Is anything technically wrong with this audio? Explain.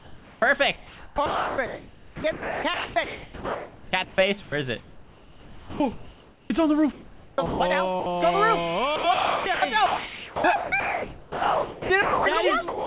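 Yes, sound chopped by the voice detector from 0.0 to 8.06 s and from 8.96 to 12.86 s. The sender's voice detector is likely gating repeatedly, replacing about 5.6 s and 2.8 s of 4 kHz-limited call audio with comfort noise, so the sound chops.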